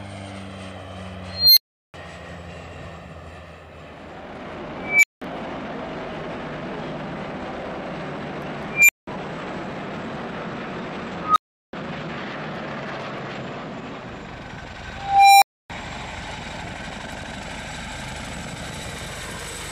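A recursive filter kept going unstable, its feedback driving the output to grow without limit until it overflowed and reset. Each time, this unstable filter fault sounds like a squealing tone that swells over a fraction of a second, clips, then drops to silence: at 1.29–1.94 s (around 4 kHz), 4.80–5.22 s and 8.70–9.07 s (around 2 kHz), 11.20–11.73 s (around 1.5 kHz), and 14.96–15.70 s (around 700 Hz). Build-ups run 160–460 ms and the silences 190–370 ms.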